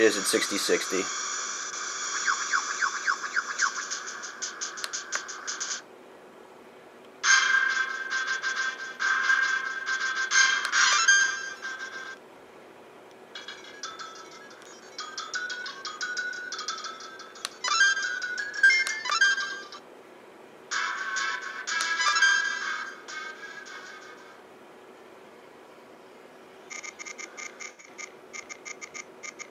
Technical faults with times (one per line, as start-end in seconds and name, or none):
27.67-27.88 AAC frame loss with concealment